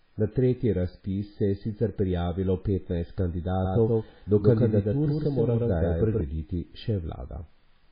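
Speech that sounds watery and swirly all the way through, with a dull, band-limited tone because nothing reaches above 5 kHz and the consonant attacks are smeared. This is likely heavy MP3 compression, with the damage pointing to a very low bitrate of around 16 kbps. Short of bits, the encoder has cut the treble at 5 kHz and keeps dropping weak frequency lines in and out from frame to frame, which is what makes the sound swirl. From 3.65 s to 6.21 s a second copy of the same speech runs alongside the first, at about the same loudness and trailing it by roughly 150 ms. The copy has no reverberant tail or room colouring and it starts and stops abruptly at those times, which marks it as a doubled audio track, likely caused by the signal being mixed in a second time through a slower path.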